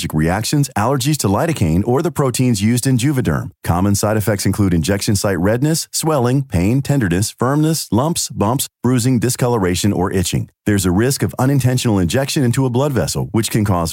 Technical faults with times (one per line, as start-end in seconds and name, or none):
none